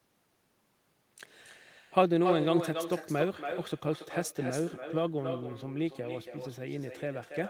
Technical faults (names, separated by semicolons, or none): echo with no canceller